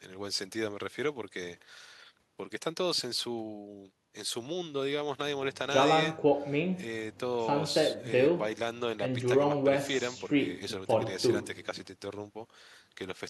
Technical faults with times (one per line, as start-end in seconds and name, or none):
none